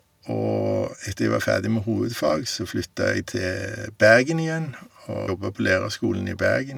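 A speech recording with a single tick at 5.27 s, where the sound drops out for a split second and then picks up from a different point. This is a CD skip: a jolt or disc flaw knocked the laser onto another turn of the spiral, so the player muted briefly and resumed elsewhere.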